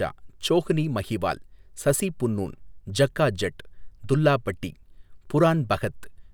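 Nothing goes wrong anywhere in this bit of speech, so there's no fault to point to at any moment.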